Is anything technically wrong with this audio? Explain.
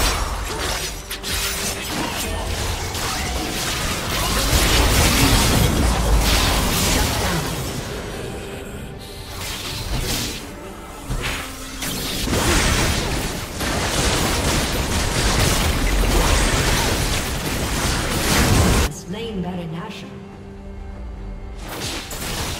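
Yes. From 17.43 to 17.95 s a gritty burst of crackle tears through the sound, then stops. This is processor overload crackle. The processor repeatedly missed its deadlines, which fits a buffer of roughly 3 ms with around fifteen misses. Each missed buffer was skipped, leaving a hard-edged gap.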